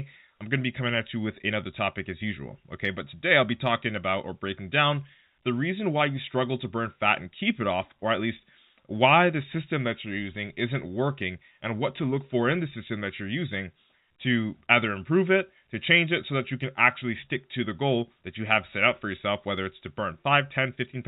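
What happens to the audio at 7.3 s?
Nothing goes wrong at 7.3 s: the speech carries on intact through that moment, with the band-limited, telephone-like quality of G.711 coding that stays the same throughout.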